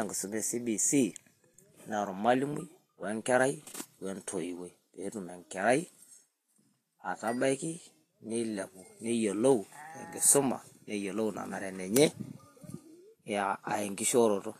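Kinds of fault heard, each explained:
Vorbis compression: the speech has audible codec damage, with a grainy hiss in its treble and nothing above 14.2 kHz, likely from Vorbis coding at a low bitrate near 33 kbps. Unlike a plain low-pass filter, fine detail below the cut-off is replaced by noise instead of simply fading away.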